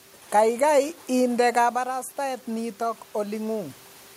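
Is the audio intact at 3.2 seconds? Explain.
No. From 1.72 to 3.83 s the automatic gain rising is under way: after the talker moved back near 1.5 s and the input fell about 9 dB, the gain control slowly raised its gain about 3 dB, so voice and room noise swell together across 3.2 s.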